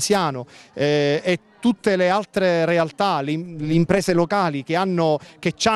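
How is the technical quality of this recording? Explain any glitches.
The recording has one audible glitch, confined to a short stretch near the end.

Overlap-add ripple, from 3.46 to 4.26 s: the audio was split into windowed frames and rejoined with an overlap whose gains don't sum to a constant, so the level swells and dips once per frame, by about 6 dB. At a frame rate of roughly 150 Hz, that modulation is too fast to hear as separate pulses and instead comes across as a metallic buzz with extra tones around each note, laid over the sound for that stretch.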